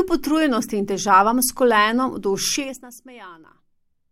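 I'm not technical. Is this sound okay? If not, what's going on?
No. From 2.52 to 2.90 s, a fast ticking rides on the speech as it gets quieter. That's zipper noise: the volume drops in about twenty tiny jumps a second instead of gliding.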